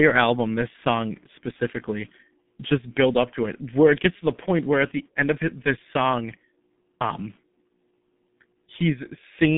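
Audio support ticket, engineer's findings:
Speech muffled and hoarse throughout, consonants smeared. Nothing above 3.8 kHz, band 150 Hz to 3.6 kHz. G.723.1 codec, heavy damage. Sound fits about 6.3 kbit/s.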